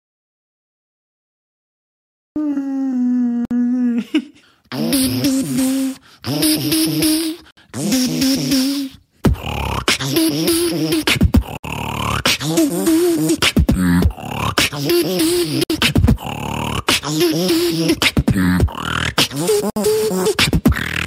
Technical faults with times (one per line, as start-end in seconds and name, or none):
0.00-2.36 audio dropout to silence
3.45-3.51 gap at a join of encoded pieces
7.51-7.57 gap at a join of encoded pieces
11.57-11.64 gap at a join of encoded pieces
15.64-15.70 gap at a join of encoded pieces
19.70-19.76 gap at a join of encoded pieces